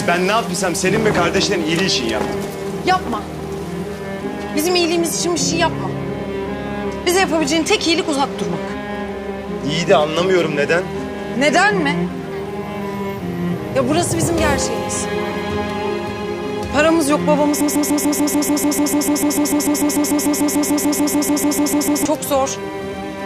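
A broken-record loop runs from 17.61 to 22.05 s: a 147 ms fragment repeats exactly, back to back, 30 times, replacing the audio that should have played there, likely from a stalled player or stream resending its last buffer. Waveform and spectrogram show an identical block tiled at a regular rhythm.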